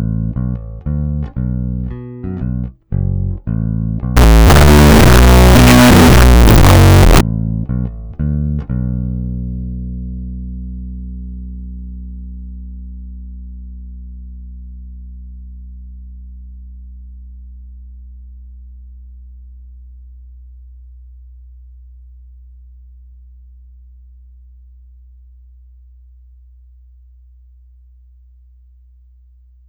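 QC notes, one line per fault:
4.17–7.21 s float read as integer: abrupt, very loud, harsh near-square sound with background noise as loud as everything else; likely 32-bit float samples decoded as 32-bit integers.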